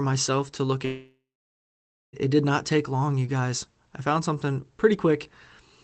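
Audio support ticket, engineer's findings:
Long network dropout, 0.85 to 2.15 s: packets likely stopped arriving; concealment smears last sound into fading buzz, then 0.9 s silence; speech resumes minus the lost stretch.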